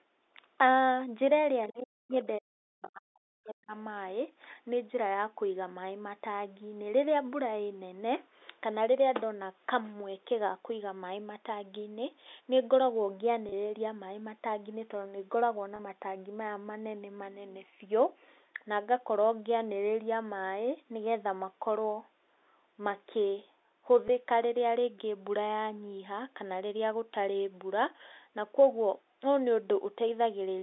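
At 1.64 s a brief, faint second voice slips in for about 70 ms, sitting roughly 30 dB under the main speech, barely a fragment. This is other side's voice leaking through, likely because the far end was playing from a loudspeaker and the echo canceller left a small residue of it in the microphone signal, over the narrow telephone band of the G.711 line.

Right after that the talker's speech caves in, from 1.71 to 2.15 s and again from 2.38 to 3.71 s. Level falls by up to around 40 dB, so the voice dips, thins and drops out in pieces for well over a second in total. This is speech suppressed in double talk. Both ends were likely talking at once, and the echo canceller, unable to tell its own talker from the returning echo, attenuated everything together.

Three short glitches follow, at 13.49 s and 15.76 s, each lasting 30 ms, and at 24.08 s. In each, the sound seems to hang for an instant on a slightly buzzy, held tone before carrying on. 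This is packet loss with pitch repetition. Audio went missing, which fits three 10 ms packets in the first two gaps and one in the last. The receiver bridged each hole by repeating the last pitch cycle of the speech, and the gaps were too short for that repeat to fade out.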